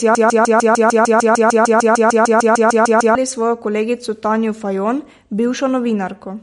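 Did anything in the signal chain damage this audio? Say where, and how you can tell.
Yes, two things. Right from the start the audio is caught in a broken-record loop: a 150 ms fragment repeats back to back, already going when the clip opens and continuing until about 3.15 s, roughly 20 passes. The repeats are identical, so this is a stuck buffer rather than an echo. The likely cause is a player or stream stall that kept re-sending the last chunk it held, so whatever should have played in those three seconds is gone.

The whole clip also carries plainly audible damage that sounds like MP3 compression. There's nothing above 11.2 kHz, a hard treble ceiling that points to a codec stage, and the sound has that watery, swirly texture you get when quiet frequency lines flicker on and off between frames. The likely cause is an MP3 encode starved of bits, which fits a low rate of around 48 kbps, forcing the encoder to lop off the top and thin out the detail.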